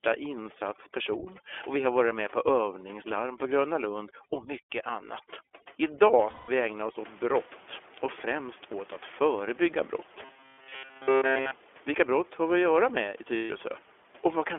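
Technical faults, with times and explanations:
Throughout, iLBC codec. The speech is cut to a telephone band of about 300 Hz to 3.4 kHz, so nothing above 4 kHz survives. Each 20 ms frame is coded on its own, which gives the voice a slightly rough, synthetic edge. This fits iLBC's 15.2 kbps mode.
0.0 to 6.97 s, overdone noise removal. The room noise sits about 23 dB below the speech. The noise reduction was set too strong for it. It shuts bands down wherever they resemble its noise estimate, so the background drops and breaks up into twinkling specks. Softer parts of the voice are pulled down too.
6.30 to 6.50 s, 11.20 to 11.23 s and 13.36 to 13.52 s, lost iLBC frames. The gaps last 180, 60 and 140 ms. The decoder fills each one by repeating the last pitch cycle mixed with noise, so it sounds like a held, faintly buzzy vowel. Because frames stand alone, the voice recovers almost at once afterward.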